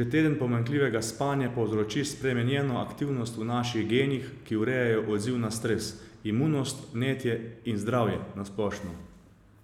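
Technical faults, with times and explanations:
Nothing stood out on listening to this speech recording.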